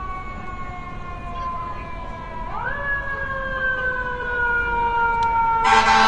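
From start to finish the sound has a smeared, swishy coarseness, likely low-bitrate audio saved at a high bitrate: a roughly 32 kbit/s encode re-saved as MP3, with content up to about 19.6 kHz.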